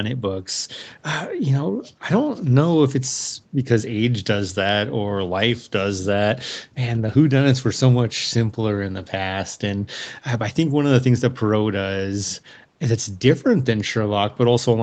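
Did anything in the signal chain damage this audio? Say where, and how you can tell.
No, nothing damaged this audio.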